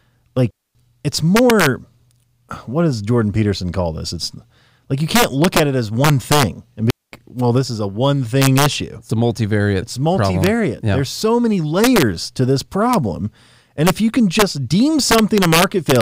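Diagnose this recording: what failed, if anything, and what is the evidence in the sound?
Sharp, violent cracks flash out on the loudest peaks of the speech throughout, harsher than ordinary clipping. This is integer overflow at a sample-format or gain stage: driven about 2 dB past full scale, a small fraction of peak samples wrap to the opposite sign instead of being limited.

Clean holes of near silence, with no noise burst on either side, open at 0.51 to 0.75 s (about 245 ms) and 6.91 to 7.12 s (about 219 ms). These are digital wireless dropouts: the link lost too much data, and the receiver muted with a very short fade.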